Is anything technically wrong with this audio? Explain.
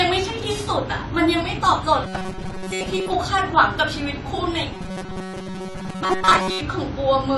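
Yes. The speech is dulled throughout, with nothing above 11.5 kHz and a smeared, warbly texture. This points to AAC compression, likely at a low bitrate around 32 kbps. The fizz tells it apart from a plain low-pass filter.

Between 2.04 and 3.13 s, and again from 4.74 to 6.61 s, the speech turns into a robotic sound from repeated short buffers. This is a rigid metallic buzz at 188 Hz, likely caused by most of the audio being replaced with loops of the last few milliseconds, which fits a buffer of about 5.3 ms. Dropouts would leave gaps; here the fixed pitch continues without a break.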